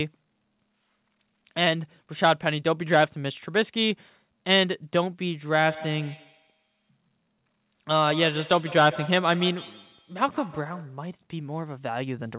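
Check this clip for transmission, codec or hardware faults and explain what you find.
One fault stands out: feedback echo between two devices from 5.56 to 11.04 s. A second device replays the speech into the first microphone, so it returns about every 150 ms at about -16 dB, thinner each time. That fixed spacing sets it apart from room reverberation, all within a band that stops at 4 kHz.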